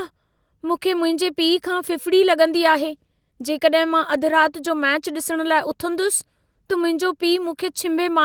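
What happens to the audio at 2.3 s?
Nothing goes wrong at 2.3 s: the speech runs on intact through that moment, with only the light coding of the Opus voice compression that is present throughout.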